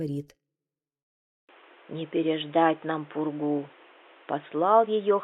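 At 1.41 s the sound drops out for 80 ms, then returns narrowed, with nothing above 3.8 kHz through to the end. This is likely an input switched to a poorer device. The new path adds its own noise floor roughly 30 dB below the signal, at an unchanged level.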